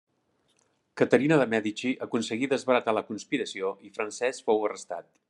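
No technical faults are audible.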